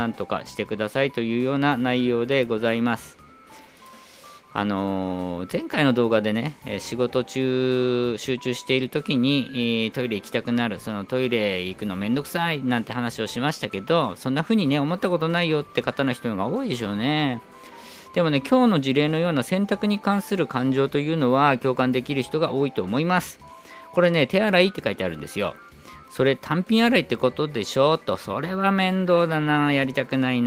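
No technical faults can be heard anywhere in the recording. Nothing at any point needs a time or a value pinned to it.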